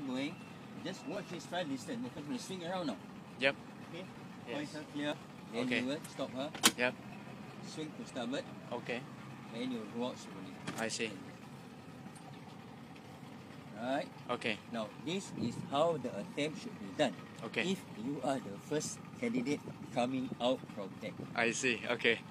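The audio skips at 1.16–1.20, 3.14–3.18, 4.15–4.20, 5.12–5.15 and 8.10–8.13 s, a sign of overlap between stream segments. Overlapping time stamps on the 1-second segments make the player discard 30–42 ms at each boundary, so the waveform jumps forward. A dropout would instead leave a silent gap.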